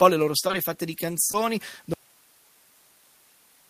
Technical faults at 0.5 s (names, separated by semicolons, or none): automatic gain falling; short concealed packet loss